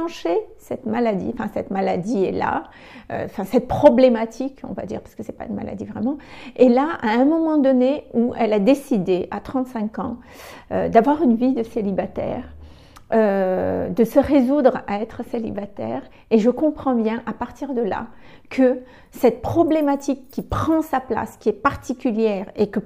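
No technical faults are audible.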